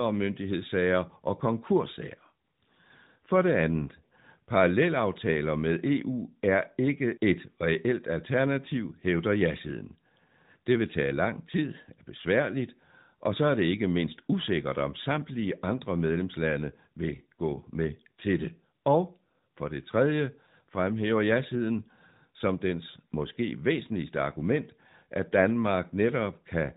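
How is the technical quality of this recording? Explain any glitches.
No glitches turn up anywhere in this speech recording; it sounds like it came through an AMR narrowband mobile codec at one of its higher-quality settings, so it has that familiar phone-call bandwidth with nothing above 4 kHz, and the codec leaves only light traces.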